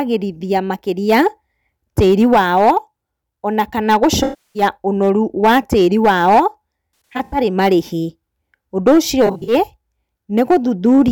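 Hard clipping runs through the whole clip. The speech is driven about 6 dB past what one stage can pass. Every peak above that limit is sliced flat. A few percent of the samples end up on the ceiling. Those flat tops add harsh harmonics high in the spectrum. The result is a crackle that rides on the loud peaks. Quieter passages stay cleaner.

AAC frame loss with concealment appears three times. From 4.23 to 4.63 s, just after "ona kana" and before "ũnoru wa tĩri", about 320 ms of audio is missing. That fits roughly 15 lost frames. The decoder patches the gap from the last good spectrum. The sound smears and turns noisy, then sinks toward silence before the speech returns. From 7.13 to 7.38 s, about 213 ms is lost in pieces spread over 384 ms. The longest run is about 100 ms. From 9.26 to 9.53 s, about 149 ms is lost over 213 ms, in runs of about 40 ms at most. These shorter scattered gaps sound phasey and blurred rather than silent.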